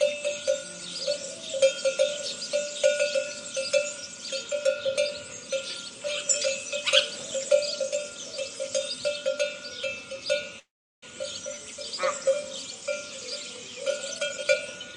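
At 10.59 s the sound stops for about 0.45 s, mostly silence, then resumes where it left off; likely a call audio freeze from delayed packets emptying the jitter buffer. From 14.15 s to 14.96 s the sound runs hurried at about 140% speed, unchanged in pitch: a jitter buffer speed-up trimming roughly a third of a second.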